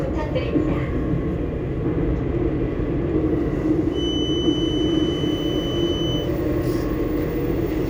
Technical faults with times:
3.89-6.32 feedback whistle

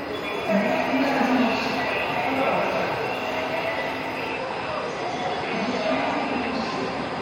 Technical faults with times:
4.28-7.22 adaptive stream at a lower bitrate

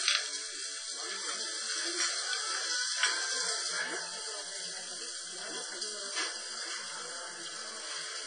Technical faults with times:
0.00-8.27 WMA compression

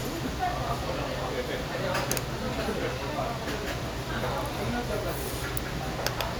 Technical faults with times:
none

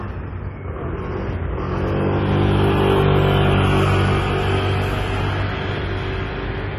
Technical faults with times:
0.00-6.79 AAC compression

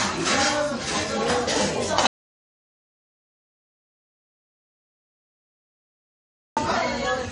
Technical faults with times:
0.00-7.32 MP3 compression
2.07-6.57 audio dropout to silence

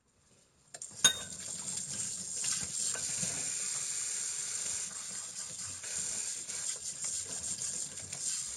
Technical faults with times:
0.00-8.56 imaging from linear upsampling

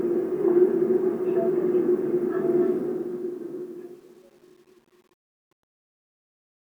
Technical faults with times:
2.66-6.64 truncation distortion on a fade

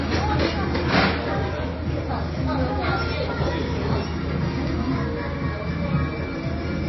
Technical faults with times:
0.00-6.88 MP3 compression

